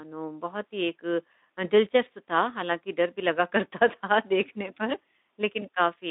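Speech over a narrowband Speex link, line band roughly 200 Hz to 3.7 kHz, no faults found, with the light coding texture expected of that path.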